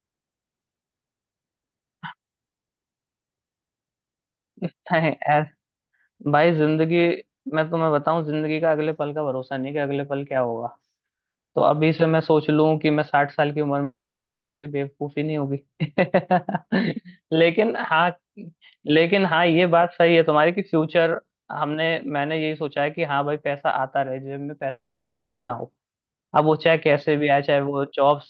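Speech that cuts out twice, from 13.83 to 14.65 s and from 24.69 to 25.51 s: each time the last sound smears into a brief fading buzz or hiss, then about 0.7 s of near-silence before speech resumes with that stretch gone. A long network dropout is the likely cause, with roughly 0.8 s lost each time through the Opus call path.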